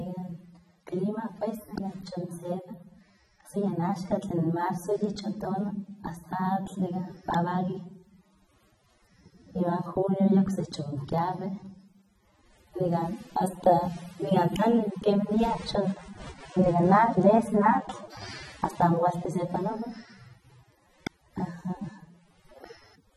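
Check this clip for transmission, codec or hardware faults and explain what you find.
Two things stand out in this speech clip: low-bitrate codec damage throughout, and three loud pops.

The AAC compression is plainly audible the whole way. Nothing reaches above 16.6 kHz, and the sound is dull and smeared. That's likely AAC-LC at a low bitrate, roughly 24 kbps.

Loud pops land at 1.78 s, 7.34 s and 21.07 s. Each is a single sharp click, roughly 15, 20 and then 25 dB above the speech, which carries on underneath. They're likely voltage spikes from a plug, a switch or a driver glitch.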